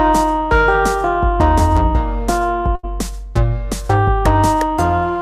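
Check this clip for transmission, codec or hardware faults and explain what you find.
There's one transmission fault in the clip: a burst of packet loss from about 2.75 s to 2.85 s. A short run of packets didn't arrive in time, so the receiver covered about 78 ms by carrying on the last bit of sound it had and turning it down as the gap went on. You hear a brief smeared tail that fades out. Then the audio picks up again, with about 80 ms of it missing.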